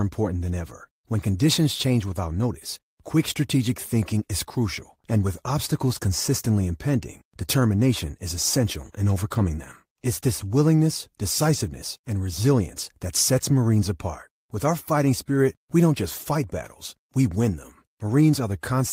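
No technical faults are audible.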